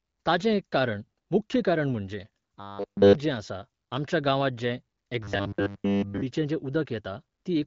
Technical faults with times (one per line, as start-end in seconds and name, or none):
2.60-3.15 robotic sound from repeated short buffers
5.23-6.21 robotic sound from repeated short buffers